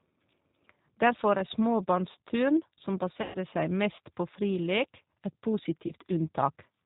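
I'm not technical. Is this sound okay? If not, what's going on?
No. Two problems can be heard.

Throughout the clip, the speech has passed through the G.729 codec, a low-data phone-call format. It doesn't send the actual sound. It sends a rough description of the voice, and the far end rebuilds the speech from that. Everything above about 4 kHz is dropped, so the speech sounds muffled and narrow, like an old phone line. The rebuilding is clearly audible as a slightly rough, artificial quality on every word.

There are also two moments of VoIP packet loss concealed by the speech codec. Pieces of the call were lost in transit, and the receiving end filled the gaps by guessing, stretching the last bit of sound it had. From 3.22 to 3.37 s, about 120 ms of audio went missing. It comes out as a smeared, buzzy tone or noise that fades, and the speech stays weak for a moment after it returns. A shorter 20 ms gap at 5.87 to 5.93 s causes a brief blur.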